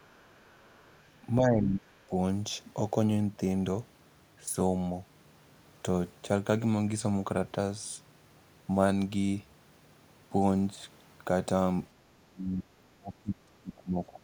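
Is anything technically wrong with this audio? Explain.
Yes, two kinds of echo-canceller trouble are audible in this speech.

Other side's voice leaking through, 0 to 1.2 s: a faint second voice, about 35 dB under the talker, likely loudspeaker echo the canceller left in.

Speech suppressed in double talk, 1.4 to 2.1 s and 12.0 to 14.2 s: the talker drops by up to about 30 dB, likely because the canceller turned both its own talker and the echo down while both sides spoke.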